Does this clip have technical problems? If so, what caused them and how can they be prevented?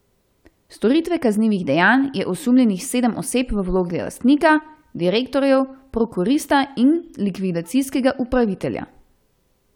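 No, nothing stood out as a technical problem on listening to this speech clip.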